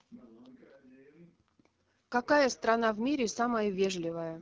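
From start to finish the speech carries AMR wideband (HD Voice) codec damage, plainly audible as a rough, raspy texture on every phrase, which fits one of the codec's lowest rates, around 8.85 kbit/s. Too few bits reach the pulse-driven vocal tract model, so the buzz of voiced sounds turns grainy. A spectrogram would show smeared harmonics below 6.4 kHz, a hiss-like band from 6.4 to 7 kHz, and nothing above 7 kHz.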